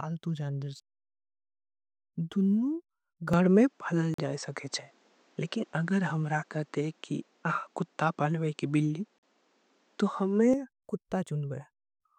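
Speech, with its sound turning duller from 3.33 s to 10.54 s, most likely an input switched to a poorer device. Nothing reaches above 8.5 kHz, the level shifts by about 5 dB, and a faint new noise floor appears. All three change together and revert with no silence at either join, which sets this apart from a simple filter. A gap between chunks cuts in at 4.14 s and again at 9.18 s, each a 44 ms hole. The five-second spacing fits chunked delivery, and unlike a dropout, no sound goes missing.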